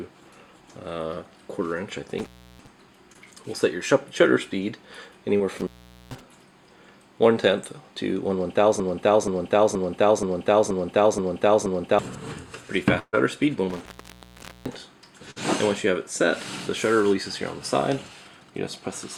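At 2.18 to 2.67 s the first intermittent contact occurs: a loose plug or cable connection opens for about a third of a second. The audio drops out with crackle at the break and at the reconnection, and only faint hiss and low-level noise remain while the circuit is open. The same fault returns at 5.58 to 6.21 s, open for roughly 0.44 s, and again at 13.70 to 14.81 s, where the line stays open for about 0.8 s.

Between these, at 3.13 to 3.17 s and 5.37 to 5.41 s, there are two cases of short concealed packet loss. Each time about 20 ms of the stream failed to arrive, and the decoder extended the preceding sound to fill the hole before blending back into the real signal. The result is a brief smear or wobble rather than a clean gap, and a very short transient in that window can disappear.

From 8.80 to 11.99 s a broken-record loop takes over. A fragment of about 0.48 s repeats seven times back to back, exactly identical each pass. 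Whatever should have played during those three seconds is gone. The likely cause is a stalled player or stream that kept re-sending the last buffer it held.

At 12.99 to 13.15 s a burst of packet loss removes about 140 ms. The concealment carries the previous sound forward for roughly 133 ms while fading it down, followed by about 40 ms of silence, and the audio then resumes further along. A shorter burst at 15.31 to 15.38 s loses about 40 ms, covered by roughly 50 ms of decaying continuation, and is heard as a brief held tone or fading hiss before playback picks up again.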